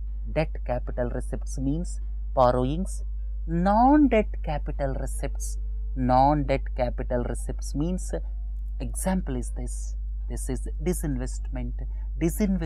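Mains hum runs through the whole clip, from the first moment to the last. Power-line current has leaked into the signal path, most plausibly through a ground loop or a transformer sitting close to the cabling, and it rides underneath everything as a constant 50 Hz drone with a few low harmonics above it. The hum is strong, sitting only a little below the level of the wanted sound, so it never fades behind it.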